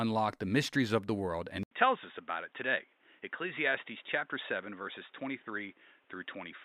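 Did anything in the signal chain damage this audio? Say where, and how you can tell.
Yes. At 1.63 s, after an 80 ms silence, the speech turns dull and boxy through to the end, losing everything above 3.8 kHz, dropping about 5 dB and gaining a new noise floor. The input was likely switched to a poorer device with a narrower band.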